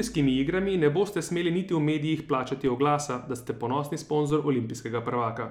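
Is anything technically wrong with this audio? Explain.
Yes, two DC steps: at 2.67 s, after "smeli niti v medijih", and at 4.30 s, after "oglasa da ste ponosni". Each time, the waveform's zero line jumps by about −31 dBFS and then drains away through a 20 Hz high-pass. Unlike a click's brief spike, this produces a low thump while the speech continues unchanged.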